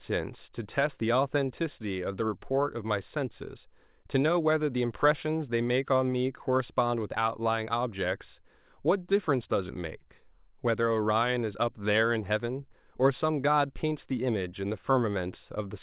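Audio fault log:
No faults logged; the speech shows the band limit of a call path, with nothing above 4 kHz, which fits a narrowband G.711 A-law link at 64 kbps.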